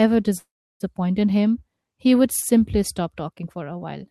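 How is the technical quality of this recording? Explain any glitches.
There's one glitch, a call audio freeze, from 0.37 to 0.83 s. Packets were likely held up so the jitter buffer ran dry. The last sound trails off as a fading buzz or hiss, then about 0.34 s of silence, and the audio resumes where it stopped, nothing lost, just pushed back about 0.43 s.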